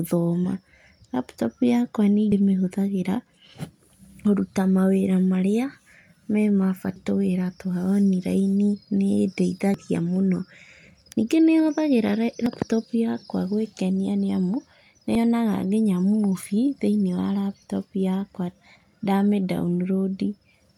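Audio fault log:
2.32, 6.96, 9.74–9.78, 12.46 and 15.15 s: damaged data in a compressed stream. Corrupt bytes make the decoder misread frames and lose sync, giving brief blips.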